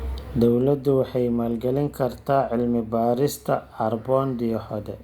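Nothing stood out on listening to this speech recording.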